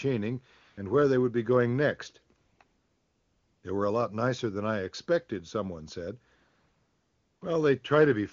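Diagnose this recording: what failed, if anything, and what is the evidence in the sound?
AMR comfort noise, from the codec's silence handling. At 0.61–0.77 s before "where they would be", 2.37–2.59 and 2.63–3.63 s after "would be going next", and 6.35–7.41 s after "I expected someone said", the real background swaps for smooth, steady synthetic hiss.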